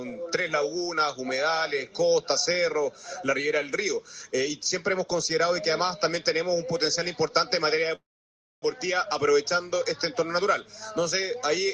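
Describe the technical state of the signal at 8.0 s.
At 8.0 s you're inside a call audio freeze that runs from about 7.95 to 8.64 s. The last bit of sound smears on briefly and fades, then there's roughly 0.6 s of silence before the audio picks up right where it left off. Nothing's actually lost; it's just shoved about 0.67 s later. That pattern most likely comes from packets stalling in transit and the jitter buffer running dry.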